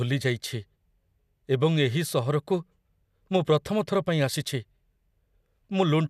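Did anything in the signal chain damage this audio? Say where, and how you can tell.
No, nothing in the chain damaged this speech.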